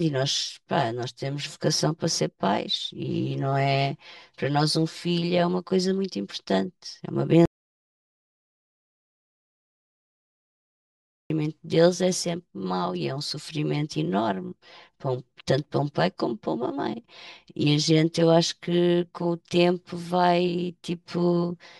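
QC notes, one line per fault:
Throughout: channel delay (comb filtering). One channel runs roughly 5 ms behind the other, and when the two are summed to mono, whatever they share cancels at evenly spaced frequencies, starting near 100 Hz and repeating every 200 Hz or so. The speech sounds hollow and phasey. Unlike room reverberation, there is no decay tail. The notches sit fixed in the spectrum and don't move with the material, which is what gives the steady tube-like colour.
7.46 to 11.30 s: audio dropout to silence. The speech cuts off mid-flow and returns about 3.85 s later, with everything in between gone. The gap is complete silence, with no room tone, hiss or background underneath. That separates it from a natural pause, which would still carry the room's noise floor. The likely cause is a lost input, such as a disconnected device, a failed link or a stray mute, while the recorder kept writing silence.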